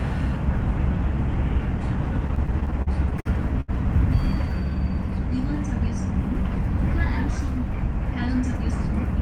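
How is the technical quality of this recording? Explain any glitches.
There's one glitch: repeated stalls (stutter) from 2.27 to 3.70 s. The jitter buffer kept running dry, so the receiver stretched the last sound across 13 short gaps, the longest 75 ms. Nothing's lost, but roughly a fifth of that stretch drags and stutters.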